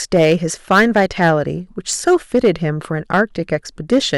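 Hard clipping in this speech at 0.15–0.33, 0.71–1.31, 1.93–2.50, 3.14–3.55 and 3.92–4.17 s, overdriven by about 4, 9, 5, 4 and 4 dB: the peaks exceed what a stage can pass and are sliced flat, adding high harmonics heard as harsh, crackly fuzz.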